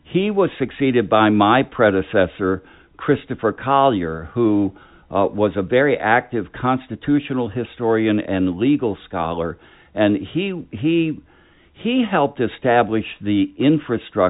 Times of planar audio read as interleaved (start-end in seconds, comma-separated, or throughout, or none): none